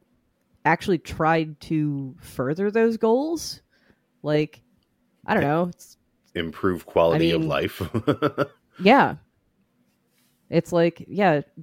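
No audible technical fault turns up anywhere in this recording; the signal holds steady throughout without any break, distortion or dropout.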